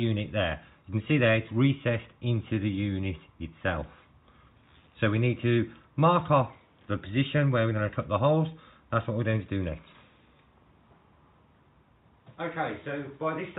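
No technical faults can be heard in this audio.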